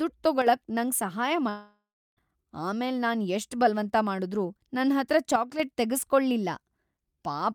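At 0.42 s the speech level falls abruptly by about 6 dB for roughly 50 ms. The likely cause is one channel dropping out: with one stereo side lost, the mono sum keeps only half of the shared signal. The same drop recurs from 5.36 to 5.60 s.

From 1.49 to 2.19 s a likely long network dropout occurs. The last sound smears into a fading buzz or hiss, followed by about 330 ms of silence. Roughly 680 ms of speech never arrives, and the audio resumes past the gap.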